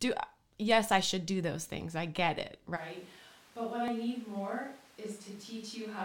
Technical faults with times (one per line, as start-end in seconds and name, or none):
2.78-6.05 switch to a distant microphone
3.88 overlap between stream segments